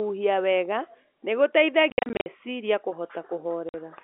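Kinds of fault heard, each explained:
Packet loss filled with silence: missing packets were replaced by silence, leaving hard-edged holes. Between 1.9 and 2.26 s, 240 ms is lost in scattered gaps up to 60 ms long; a 50 ms hole follows at 3.69 s. Gap sizes fit 10 ms packets.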